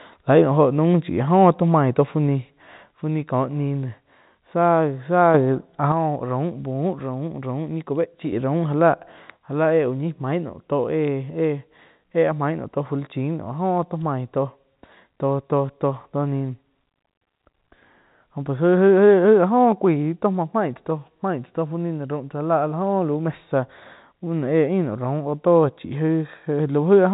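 One channel drops out at 2.94 to 5.34 s, 5.92 to 8.32 s, and from 9.37 s to the end. Each time the speech abruptly falls by about 6 dB, likely because one stereo side is lost before the mono sum, halving shared content.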